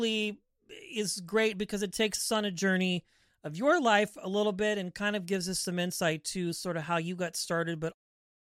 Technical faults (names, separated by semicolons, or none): none